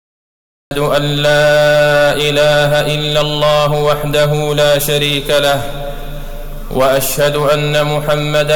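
The recording or stream began late, producing a cut-off start: the clip holds digital silence until 0.71 s, then the audio appears abruptly mid-sound. With no natural attack or fade-in, the first sound begins already in progress rather than building up from its onset.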